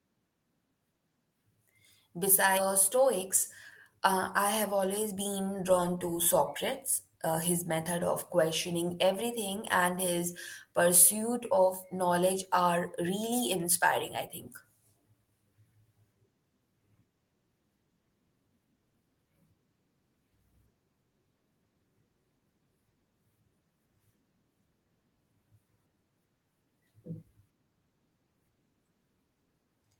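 A skip ahead occurs at 2.57 to 2.59 s. About 0.4 s of speech never reached playback, either lost in transit or discarded when the jitter buffer overflowed while newer audio was already queued. Nothing fills the hole, so the sound on either side is butted together and the speech lurches forward abruptly. The listener hears a sudden jump rather than a pause, with part of the utterance simply gone.

A jitter buffer speed-up runs from 4.71 to 5.89 s. The buffer had accumulated more audio than its target, and to bring the delay back down the receiver repeatedly cut out tiny slices, each a pitch period or a few long, removing something like 70 ms in total. Playback runs at about 106% speed while the pitch stays unchanged, so the speech sounds briefly rushed.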